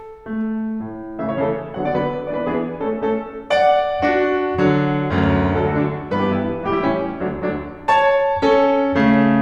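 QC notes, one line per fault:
8.46–8.62 s and 9.00–9.22 s, hard clipping: the music pushes about 2 dB past what the stage can pass, so the peaks get sliced flat. Those squared-off tops throw harmonics high up the spectrum, which you hear as a brief crackly edge on the loudest hits.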